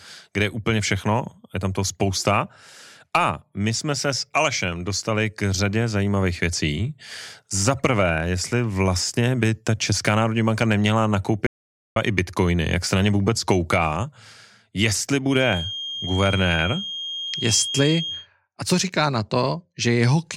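At 11.47 s, right after "národní banka neměla", the speech cuts out dead for about 0.50 s, an audio dropout to silence, and returns at 11.96 s with "i bitcoiny jak se". The gap holds no room tone at all, so whatever was said there is lost. The likely cause is a brief loss of input while recording carried on writing silence. On the waveform it is a flat line; on a spectrogram, a dark vertical band.

From 15.24 s to 18.28 s a feedback whistle sits behind the speech, a thin, steady tone at 3.2 kHz, roughly 10 dB below the voice, swelling and fading slowly in level and ending just before "a co říká na". It most likely comes from a loudspeaker-to-microphone loop held right at the edge of feedback without running away. A spectrogram shows a narrow horizontal line at 3.2 kHz across those three seconds.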